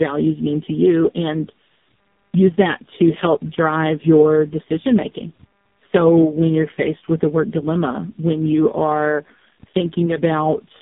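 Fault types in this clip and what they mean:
Tandem speech coding: the speech sounds re-coded through roughly three speech codecs in series, each worsening the last: rough, muffled, warbly, with nothing above 3.7 kHz.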